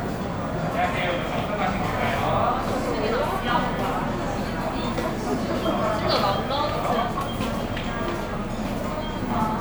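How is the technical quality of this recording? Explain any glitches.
The recording has no technical glitches to report. Nothing in the audio points to a fault in how these sounds were captured or delivered.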